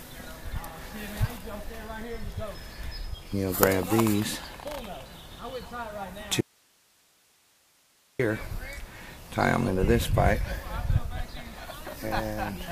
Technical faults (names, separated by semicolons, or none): audio dropout to a faint residue